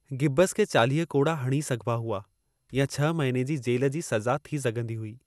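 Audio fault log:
Throughout, generation loss: the speech sounds swirly, smeared and hollow, attacks blur, and nothing survives above 12.5 kHz. It's likely the result of about five rounds of lossy re-encoding, fitting MP2 at around 128 kbit/s, each pass adding fresh quantisation noise.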